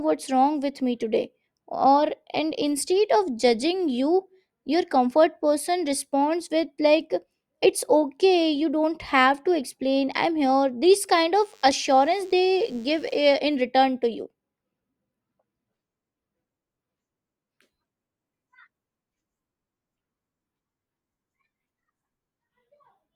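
A speech recording with a thin, steady buzz from 11.34 s to 13.34 s, lasting two seconds and sitting roughly 35 dB below the speech. The buzz has a 100 Hz fundamental with many harmonics stacked above it. That pattern is a DECT cordless phone buzz: a nearby DECT handset or base station transmits a short radio burst every 10 ms, the audio circuitry rectifies those bursts, and their 100 Hz repetition becomes audible.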